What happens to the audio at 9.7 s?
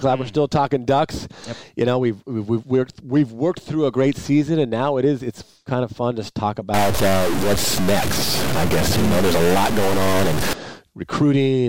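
A stuck bit runs from 6.74 s to 10.53 s, covering 9.7 s. The harsh, buzzy distortion points to one data bit likely held at a fixed value, so about half the samples jump by a step near -15 dBFS, and quiet stretches fill with noise.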